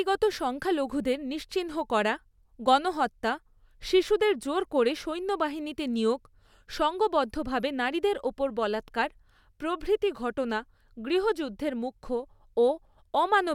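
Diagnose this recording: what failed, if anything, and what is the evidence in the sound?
Nothing failed; no fault is audible in this speech.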